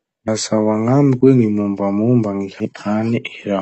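The speech is dull and smeared, with a fizzy, warbling edge on sibilants. The codec damage is plainly audible. This is likely AAC compression, AAC-LC at a low bitrate, which fits about 32 kbps. There are sudden jumps at 0.28 s, 1.21 s and 2.60 s. No silence is heard at these points; the sound simply skips ahead. Roughly a tenth, a fifth and nearly a third of a second go missing. The likely cause is a dropped buffer (overrun), where the hardware overwrote samples before they were read.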